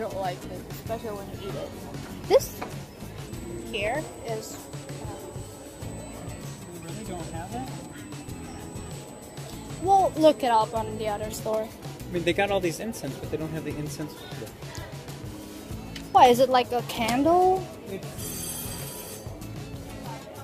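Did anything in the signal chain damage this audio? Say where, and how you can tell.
Yes. USB whine from 3.27 s to 11.27 s: a steady, fixed-pitch tone at 8 kHz, strongest at its 16 kHz harmonic, sitting roughly 15 dB below the signal. That pitch matches the 125-microsecond microframe rate of the USB bus, whose current draw is leaking in through the power or ground of the analogue wiring.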